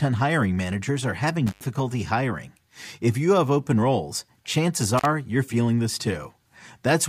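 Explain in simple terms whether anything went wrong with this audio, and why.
Two quick dropouts come from an intermittent contact, probably a loose cable or plug. Right after "hiring managers are having", around 1.47 to 1.65 s, the sound crackles and cuts out for about 85 ms. It happens again around 4.98 to 5.05 s, after "have open roles chances", with a 43 ms gap before "you're feeling this".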